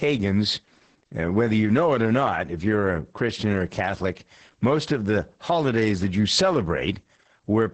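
From start to finish the speech carries Opus voice compression in its SILK linear-prediction mode. Nothing survives above about 8.8 kHz, which fits a wideband setting, and the damage is heavy. Speech sounds muffled, hoarse and faintly robotic because the excitation is coded coarsely, pointing to roughly 10 kbps. Unlike a plain low-pass filter, which only dulls the sound, this adds a buzzy, synthetic texture in 20 ms frames.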